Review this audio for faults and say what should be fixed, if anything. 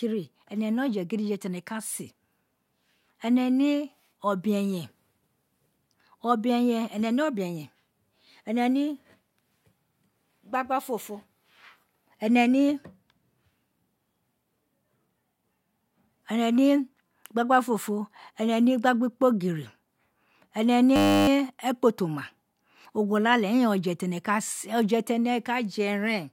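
A system hang loop runs from 20.96 to 21.28 s. The speech freezes into a steady 100 Hz buzz. A 10 ms slice repeats while the driver stalls, which fits a 10 ms buffer. Fix the stalling driver or thread so playback never starves.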